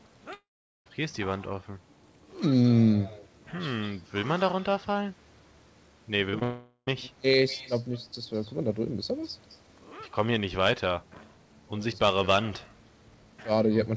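From 0.34 to 0.88 s there is a long network dropout, likely from packets that never arrived. The receiver extends the last sound as a fading buzz, then leaves about 0.4 s of silence. About 0.52 s of audio is simply gone when the sound resumes.

Around 6.30 to 6.35 s, and again from 6.39 to 6.43 s, comes short concealed packet loss. Roughly 40 ms and then 20 ms never reached the decoder in time. The receiver patches each gap by continuing the preceding sound, heard as a quick smear or wobble before it blends back.

Straight after, from 6.43 to 6.89 s, a second long network dropout follows, again likely caused by lost packets, removing about 0.44 s. Here the concealment stretches the last sound across nearly the whole gap as a fading buzz or hiss, with only a brief silence before the audio returns further on. Nothing is heard above 8 kHz, which fits a G.722 call codec.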